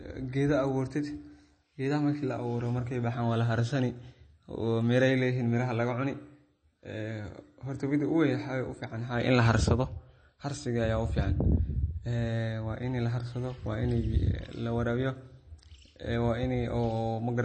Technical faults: MP3 compression

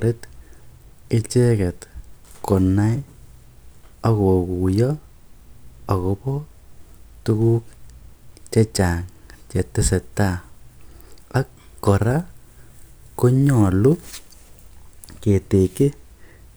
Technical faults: none

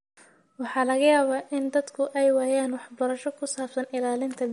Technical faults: MP3 compression

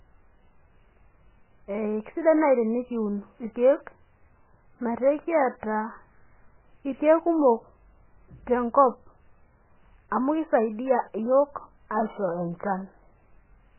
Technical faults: MP3 compression

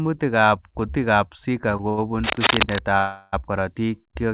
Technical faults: repeated stalls (stutter); cable scratch noise; short stall from a late packet; call audio freeze

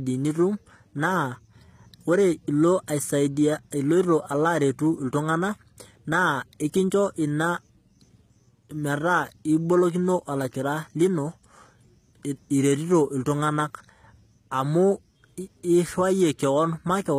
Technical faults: HE-AAC compression

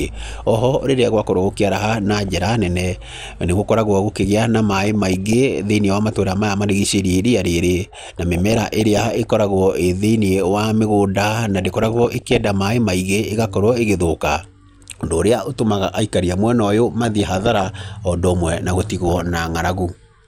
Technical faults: MP2 compression; DAB burbling

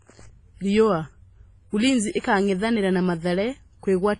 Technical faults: WMA compression; pre-echo

